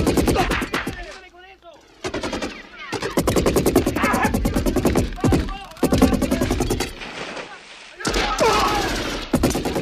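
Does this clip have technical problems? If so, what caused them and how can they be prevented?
Yes, there's one: a short burst of damaged data in the compressed stream at about 3.93 to 3.98 s. The decoder hits corrupted frames, loses sync and hunts for the next header, so you get a quick blip. Checksummed transfers and verified downloads would prevent it.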